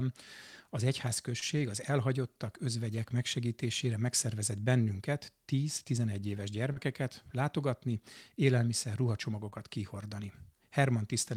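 Speech, with short concealed packet loss at four points: 1.39 to 1.43 s, 5.83 to 5.86 s, 6.72 to 6.78 s and 9.50 to 9.54 s. Each time, audio arrived too late for the decoder, about 20 ms at the first, second and fourth and 40 ms at the third. The receiver patched each gap by extending the preceding sound, either at its pitch or as shaped noise, before fading back into the real signal, leaving a brief smear or wobble.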